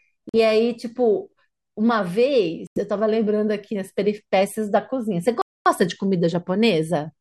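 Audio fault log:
0.29–0.36 s and 2.67–2.81 s, Bluetooth dropout: the speech just cuts out, first for about 46 ms and then for about 91 ms, and picks up further along as if it had kept playing. That's likely packets missing the headphones, fitting roughly three and six lost frames.
5.42–5.66 s, playback stall: the speech halts mid-flow for a noticeable 243 ms of silence, then carries on. That's likely the player running dry of data or its thread getting blocked, so the output just sits idle until it recovers.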